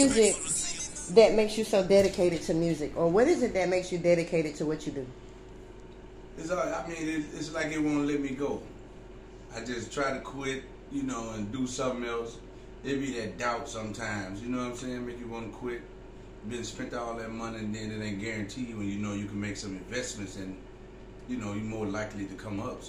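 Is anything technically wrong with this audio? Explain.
Yes. From 1.68 to 3.79 s there is mains buzz: switching spikes from the 50 Hz supply get into the signal path, repeating twice per cycle and spreading harmonics up into the kilohertz range. The result is a steady, raspy buzz sitting well below the main sound.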